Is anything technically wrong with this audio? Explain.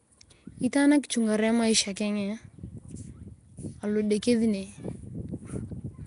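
Yes. Throughout the speech there is a rough, hissy halo and a smeared, underwater quality, with nothing above 10.6 kHz. This is likely Nellymoser compression. The codec spends a fixed two bits per sample on each block of audio and fills starved bands with noise, which fits a 44 kbps stream.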